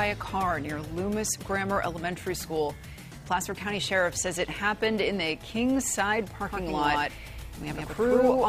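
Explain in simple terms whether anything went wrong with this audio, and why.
A doubled audio track starts abruptly at 6.43 s and runs to the end: an equally loud copy trails about a tenth of a second behind, likely from a slower second capture path.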